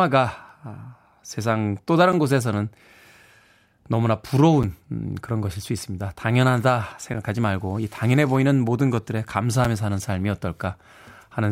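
Speech interrupted by a gap between chunks at 2.12, 4.63, 7.14 and 9.65 s, each hole about 7 ms of silence recurring every 2.5 s where the stream joins. Nothing is skipped, but the waveform drops abruptly to silence, showing as narrow vertical blank stripes on a spectrogram.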